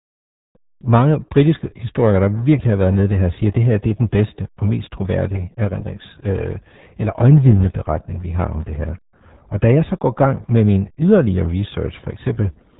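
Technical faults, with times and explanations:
Throughout: RealAudio 14.4 codec. The speech is muffled and gargly across the whole clip, and the codec damage is heavy. Nothing above 3.8 kHz gets through. The consonants lose their bite and the sibilants are gone. The band limit and the damage point to an 8 kbit/s speech coder built for dial-up modems. At that rate, the voice is rebuilt from a coarse model rather than carried as a waveform. That model fails audibly. It leaves the bubbling, watery texture.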